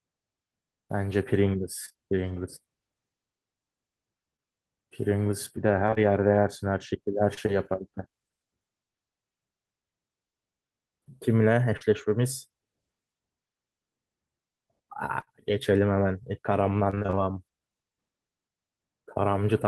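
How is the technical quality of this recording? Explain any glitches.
The speech is repeatedly broken up by network packet loss, heard both as brief smears and as short robotic bursts.

Repeated packet loss (robotic sound) occurs at 1.85–1.96 s, 5.86–5.98 s and 16.90–17.19 s. Audio kept arriving late or missing in gaps of about 20 ms, and the receiver patched each one by extending the previous sound. About half of each stretch is filler, so it turns choppy.

Short concealed packet loss occurs at 4.36–4.40 s, 7.34–7.39 s, 11.77–11.82 s and 15.20–15.28 s, where two drops come back to back. Each time, about 20 ms of audio went missing (about 40 ms at 11.77 s) and was filled from the preceding sound before blending back. Each is a brief smear or wobble.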